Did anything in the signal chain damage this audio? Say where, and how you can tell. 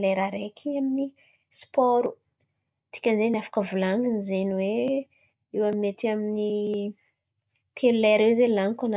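No, nothing audible in this speech recording points to damage at any stage of the chain.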